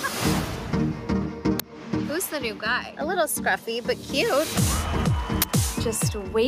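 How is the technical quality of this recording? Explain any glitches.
The technical quality is poor, with a constant level problem and two buffer glitches.

Gain pumping runs throughout: the gain ducks about 5 dB under loud sounds, likely from excessive gain driving a fast limiter. Unlike a fade, it tracks each loud sound.

An uninitialised buffer produces a loud crack at 1.6 s (5 ms, fitting a 256-sample block) and a harsh burst of digital noise at 5.42–5.44 s (21 ms, fitting 1024 samples), where leftover memory is played as sound. Unlike clicks, these are loud.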